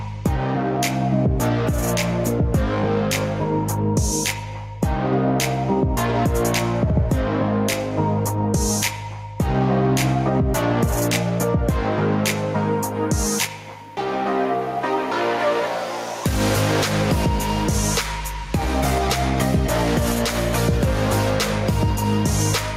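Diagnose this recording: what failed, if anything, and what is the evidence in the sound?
Gain pumping runs through the whole recording: the gain is pulled down on each loud sound, swinging by roughly 5 dB, so loud and quiet passages sit unnaturally close together and the sound feels squashed. The likely cause sits at the input stage: gain set far too high for the microphone, with a fast limiter or compressor clamping down on each peak and releasing quickly afterward.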